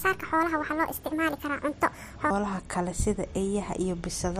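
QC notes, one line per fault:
0.00–2.30 s, section at the wrong speed: the opening speech runs 1.55 times too fast, so it sounds hurried and shrill, raised by about seven semitones, before dropping abruptly to normal pace and pitch. The likely cause is this stretch being played back against the wrong clock, which shifts pitch and tempo together. On a spectrogram, harmonics and formants sit higher and more widely spaced until 2.30 s; the waveform shows compressed syllable envelopes.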